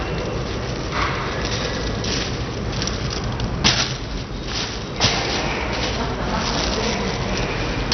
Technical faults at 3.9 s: MP2 compression

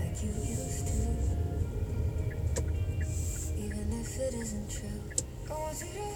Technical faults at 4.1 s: none

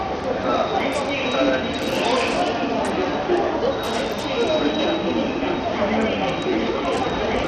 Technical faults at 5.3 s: Bluetooth SBC compression

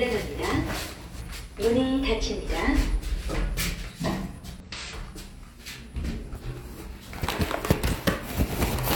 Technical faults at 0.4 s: none

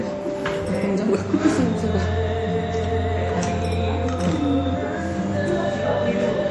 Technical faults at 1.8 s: MP3 compression

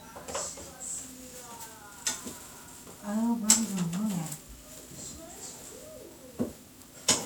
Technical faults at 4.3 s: generation loss

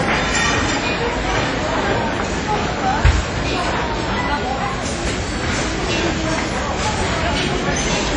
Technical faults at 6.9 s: WMA compression

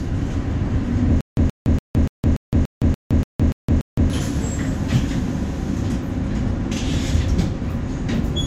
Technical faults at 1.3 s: stutter with silent gaps

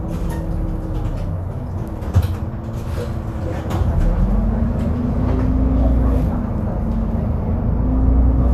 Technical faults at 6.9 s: none

